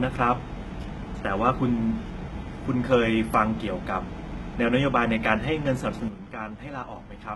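Speech in which, throughout, s sounds come out gritty, metallic and lisping and the treble is not the original, ending in a hard ceiling at 11.8 kHz. This points to heavy HE-AAC compression, likely at a very low bitrate around 16 kbps: only the lower spectrum is truly coded, and the top band is rebuilt by copying lower bands upward under a coarse envelope, so the harmonics above the crossover no longer match the real ones. At 6.08 s the level drops abruptly by about 10 dB and stays down to the end, with the background noise falling in the same step as the speech rather than fading. That is a sudden gain jump, likely a digital gain change applied from one sample to the next with no ramp to smooth it.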